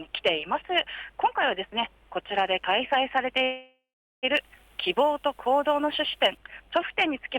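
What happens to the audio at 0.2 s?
Nothing goes wrong at 0.2 s; the audio plays through that moment intact, with no dropout, click or distortion.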